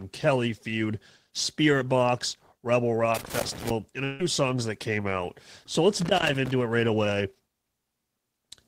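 From 3.15 to 3.70 s an irregular scratchy crackle chops the speech: loose connector crackle, a worn or dirty contact making and breaking as it moves. It returns from 6.01 to 6.51 s. At 4.04 s the speech gives way for about 0.15 s to a fading buzz carrying on the last sound, then resumes at 4.20 s with that stretch gone. This is likely a long network dropout, where the receiver filled the missing audio by extending what it last had.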